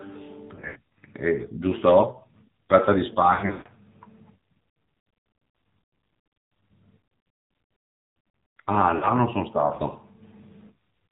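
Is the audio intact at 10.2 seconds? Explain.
No. At 10.2 seconds the speech carries AMR narrowband mobile codec damage, present across the whole clip. Nothing above 4 kHz survives, and the vocal-tract model, fed too few pulses in each 5 ms, leaves a buzzy, synthetic tone, which fits a bitrate around 7.4 kbps. A plain low-pass filter would only dull the sound, without this buzz.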